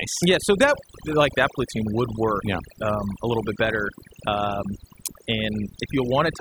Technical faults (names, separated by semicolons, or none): overdone noise removal